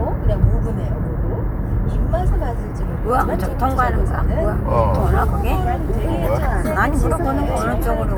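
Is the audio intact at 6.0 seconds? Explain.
Yes, the audio is intact at 6.0 seconds, with no audible fault at that moment.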